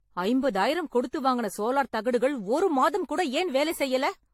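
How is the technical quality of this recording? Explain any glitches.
The recording has a lossy-coding fault that runs through the whole clip.

Generation loss, throughout: the speech was likely decoded and re-encoded with AAC several times, perhaps four, at a low rate near 64 kbit/s. Each pass quantises on a shifted frame grid, so errors accumulate, leaving a swirly, hollow, smeared tone, softened consonant attacks, and nothing above 16.5 kHz.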